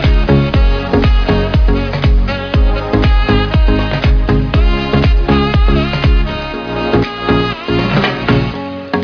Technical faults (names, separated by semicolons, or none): none